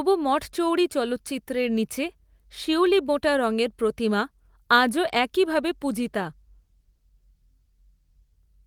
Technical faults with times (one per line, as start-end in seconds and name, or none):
5.52-8.43 call bitrate drop